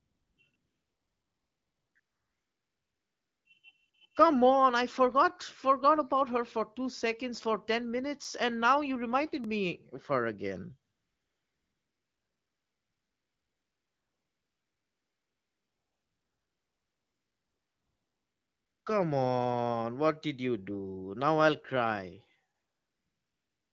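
A speech recording carried over an AMR wideband (HD Voice) link at what sounds like 12.65 kbit/s, with light coding damage. It shows two faults. AMR comfort noise fills the pauses from 0 to 0.37 s, 0.51 to 0.53 s, 0.55 to 1.95 s, 1.99 to 3.45 s, 3.89 to 3.93 s, 10.92 to 18.86 s after "me of her again", and 22.54 s to the end after "I'll cry". In those stretches the phone has stopped sending speech frames, and the receiver substitutes a smooth, steady synthetic hiss for the real room sound. The hiss switches in and out abruptly around the short early speech fragments. On a spectrogram these regions appear as flat, featureless noise bands with sharp vertical boundaries. The long eight-second stretch is uniform, with no natural background variation.

The second fault is a block of digital silence. It occurs at 8.24 s, just before "and now you reminded", lasting about 5.3 ms, which fits a 256-sample output block that was not filled in time. 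It occurs again at 9.44 s, lasting about 1.3 ms, consistent with a 64-sample block. Each one is heard as a tick or dip. On the waveform it shows as a near-flat gap cutting straight into the signal, and on the spectrogram as a thin vertical broadband stripe from the hard edges.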